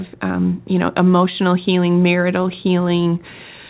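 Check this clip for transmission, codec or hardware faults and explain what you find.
Nothing stood out on listening to this speech clip.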